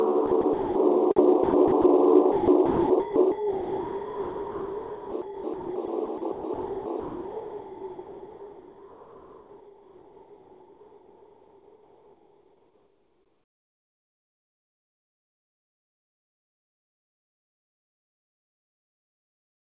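From 0.27 to 0.75 s, 1.16 to 1.84 s, and 2.32 s to the end, the sound drops in and out into a soft hiss, most likely sound chopped by the voice detector. About 280 ms, then 180 ms, then roughly 16.1 s became comfort noise. The band stops at 4 kHz, consistent with G.711 A-law at 64 kbps.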